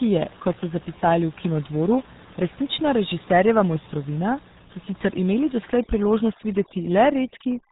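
RealAudio 14.4 codec damage runs through the whole speech clip. The sound is squeezed through a very low-rate coder, consistent with roughly 8 kbit/s, and nothing above about 3.8 kHz survives, so the voice is muffled and dull. The coder rebuilds the speech from a crude model rather than keeping the waveform, so the damage is heavy. Vowels take on a gargly, bubbling quality, and consonants blur.

Overdone noise removal starts at 5.72 s and lasts to the end of the clip. Up to that point the room noise sits steadily about 22 dB below the speech. From 5.72 s, a noise reducer pushed too hard switches individual frequency bands down or off whenever they come close to its noise estimate. The background drops away and breaks up into twinkling specks, and the quieter parts of the voice are stripped out with it.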